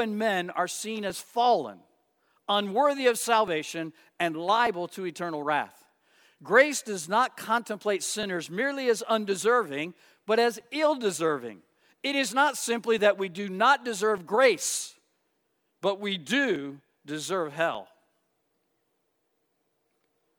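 From 1.10 s, just after "men are seen", a click recurs every 1.19 s until 20.12 s. These are likely clock drift buffer slips between mismatched device clocks.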